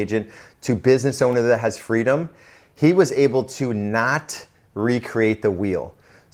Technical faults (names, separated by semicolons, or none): none